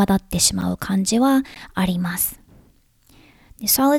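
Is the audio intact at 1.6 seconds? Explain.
No. Just before that point, at 1.55 s, there is a block of digital silence lasting about 14 ms. A short run of samples in the speech has been replaced by zeros, so the signal drops straight to nothing and jumps back without any fade. Because the gap is so brief, it is heard as a tick or dip rather than an audible hole.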